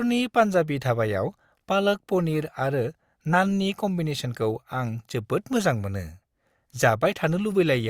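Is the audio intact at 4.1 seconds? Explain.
Yes, at 4.1 seconds the speech is intact, with no dropout, click, distortion or other fault to be heard at that moment.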